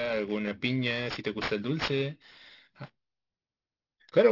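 Throughout the speech, the audio shows aliasing: the sample rate appears to have been cut without an anti-aliasing filter, which fits a drop from 44.1 kHz to 12 kHz. Everything above the new 6 kHz limit has folded back below it, landing at unrelated frequencies roughly 15 dB under the speech. Sibilants come out gritty and metallic rather than crisp, and the spectrum stays packed right up to 6 kHz instead of rolling off before the band edge.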